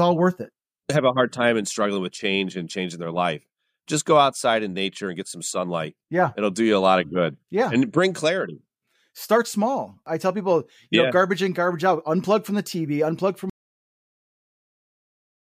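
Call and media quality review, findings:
Cut-off end at 13.50 s, right after "unplug from": speech stops mid-sound into dead digital silence, no decay. Final buffers probably never got written out before the stream closed.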